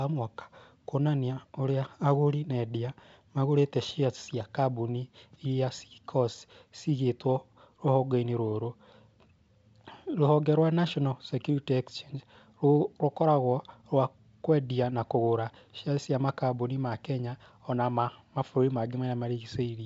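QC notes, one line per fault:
No faults to note: the speech carries through the G.722 wideband telephone coding with nothing heard above roughly 7.8 kHz.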